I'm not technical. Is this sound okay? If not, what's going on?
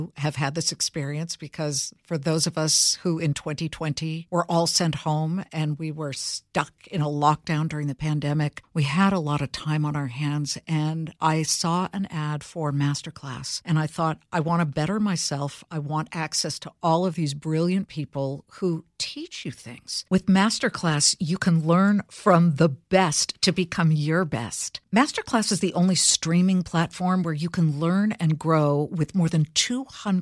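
Yes, nothing stood out as wrong when listening to this recording.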